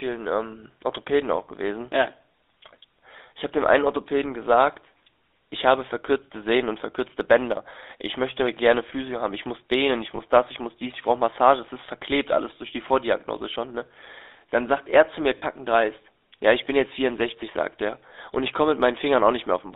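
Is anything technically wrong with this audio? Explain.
Yes, there are two problems. The whole clip has been through the GSM full-rate codec. This early mobile codec models the vocal tract and drives it with a coarse pulse excitation that keeps only every third sample, at a rate that fits 13 kbps. Here the band runs from about 300 Hz to 3.7 kHz, so the speech is thin and boxy. The damage is plainly audible as a buzzy, gravelly roughness on the voice throughout.

There are also two spots of lost GSM frames, from 10.16 to 10.20 s and from 15.38 to 15.43 s. The second gap is about twice as long as the first, which points to one dropped frame and then two. At each dropout the decoder covered the gap by repeating the last good frame. Instead of a clean gap you hear a short, rough, metallic ring smeared across that moment.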